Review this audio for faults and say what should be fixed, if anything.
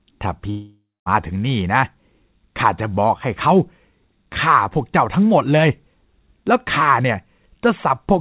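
A long network dropout likely stopped audio arriving from 0.5 to 1.09 s, so the receiver stretched the last sound into a fading buzz, then silence, losing about 0.57 s. Preventing this means a more stable network link, with redundancy or forward error correction on the call so brief losses can be rebuilt.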